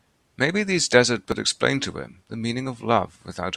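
At 1.32 s the speech is broken by a brief glitch. This is damaged data in the compressed stream. Some bytes reaching the decoder were wrong at that point. The decoder could not make sense of the frame there. It lost its place and had to hunt for the next valid frame header before decoding resumed. The garbled frame comes out as a chirp, squawk, click or short hole that does not belong to the speech.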